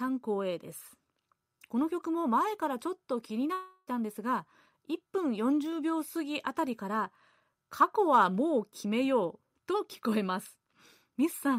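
A speech recording with one break from 3.53 to 3.89 s, likely a long network dropout in which the audio stream stopped arriving. For about 340 ms the real speech is missing. The receiver covers roughly 336 ms of it by stretching the last sound into a buzz or hiss that fades, leaving only about 10 ms of true silence before speech resumes with the lost section skipped. A spectrogram would show smeared content that weakens over that span. The waveform would show a decaying envelope ending in a brief flat line.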